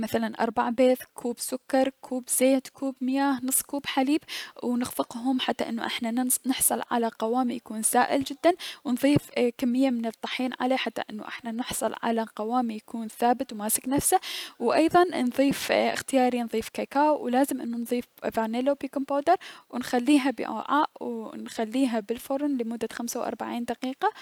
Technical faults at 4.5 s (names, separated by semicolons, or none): none